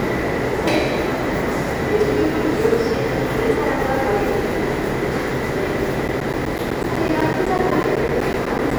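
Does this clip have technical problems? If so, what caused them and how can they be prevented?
Yes. From 6.08 to 8.71 s, periodic USB or driver dropouts blank about 10 ms every 0.125 s, showing as evenly spaced flat waveform gaps and vertical spectrogram stripes. Stop background tasks blocking the bus or driver, and use larger buffers.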